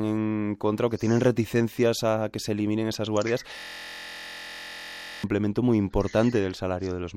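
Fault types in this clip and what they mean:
System hang loop: the playback system stalled while the audio hardware kept replaying the same small ring buffer, so one 23.22 ms slice of the speech repeats exactly, 71 times, from 3.59 to 5.24 s. At a loop rate of 43.1 Hz it comes across as a steady buzz, which fits a 1024-sample buffer. On a waveform the identical period tiles the whole span. On a spectrogram it shows as evenly spaced harmonic lines at 43.1 Hz multiples.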